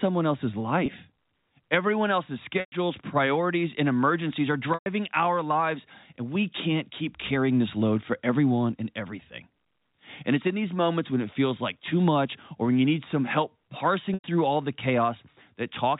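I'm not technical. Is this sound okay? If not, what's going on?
No. The audio has four short dropouts from packet loss with pitch repetition: 0.86 to 0.88 s, 2.6 to 2.72 s (just before "priorities and emergencies are"), 4.74 to 4.86 s (before "our lives and we"), and 14.14 to 14.24 s (before "all the"). Each gap was patched by repeating the last bit of sound. The first, very short one comes across as a brief buzzy hold; the three longer ones fade into silence, and the speech comes back with a short cross-fade.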